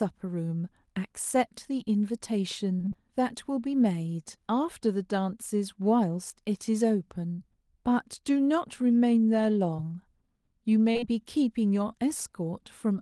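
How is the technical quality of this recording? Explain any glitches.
The recording has audible network glitches: a choppy stretch, one dropout, and several brief smears. The call path runs through a codec whose band ends around 12 kHz, which points to Opus at a moderate bitrate.

From 2.77 to 2.96 s there is repeated packet loss, which gives a robotic sound. Five short gaps, the longest 23 ms, each get patched by extending the previous sound. Nearly half of that span is synthetic, so the audio turns choppy with pieces missing. What sets it apart from a single burst is the rapid succession of separate holes.

At 7.32 to 7.40 s, a burst of packet loss removes about 60 ms in one piece. The receiver stretches the last sound and fades it out, leaving a held buzz or a fading hiss. The audio then jumps ahead with that part missing. This is one continuous hole rather than a stutter.

Short concealed packet loss occurs at 9.76 to 9.80 s and again in a tight run at 10.92, 10.97 and 11.00 s, ending at 11.04 s. 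Each hole is about 20 ms and is filled from the preceding pitch or noise, then blended back into the real audio. These events come across as a brief smear or wobble.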